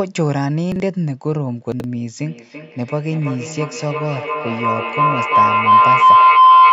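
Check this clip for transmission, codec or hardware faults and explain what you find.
Two faults are audible in this speech: brief chunks out of order early on, then a feedback howl that takes over the rest of the clip.

Chunks out of order occur at 0.72 to 0.80 s and 1.72 to 1.84 s. A 40 ms chunk arrived late by one chunk, then by two, and played after its successors. The result is a jumbled instant. Unlike dropouts, nothing is missing. The audio is only reshuffled.

Feedback howl runs from 2.19 s to the end. Two devices in one room form a microphone-to-loudspeaker loop that gains on every pass, so the repeats grow rather than decay. They narrow into a tone of roughly 1 kHz, repeating about every 0.3 s, and peak about 11 dB above the speech. Ordinary echo fades, but this keeps building.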